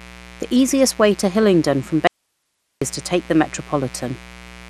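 A steady, raspy buzz sits under this speech recording from start to finish, roughly 25 dB below the voice. It is mains buzz on a 60 Hz supply: sharp switching spikes from a dimmer, rectifier or unshielded lead enter twice per cycle, spraying harmonics up into the kilohertz range. The whole clip also sounds dull and plainly gurgling, with a granular edge and nothing at all above 13.7 kHz, and this is likely MP2 compression at a low bitrate around 80 kbps, where the encoder runs short of bits, shuts off the upper sub-bands and coarsely quantises the rest. From 2.07 to 2.82 s the sound cuts off abruptly for about 0.74 s, leaving only faint hiss far below the normal level before it snaps back. That is an audio dropout to a faint residue, likely a brief loss of the signal while the downstream path stayed live.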